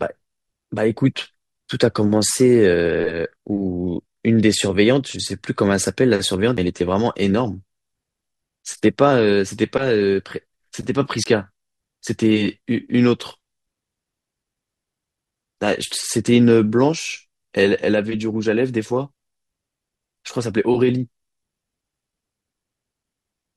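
A speech clip with two brief dropouts to silence, at 6.57 s (about 10 ms) and from 11.24 to 11.26 s (21 ms). Each gap sounds like a Bluetooth stall, likely the headphone buffer running dry while delayed packets were resent. On a waveform each shows as a flat line with abrupt edges; on a spectrogram, a thin vertical blank strip across all frequencies, with the speech resuming straight after.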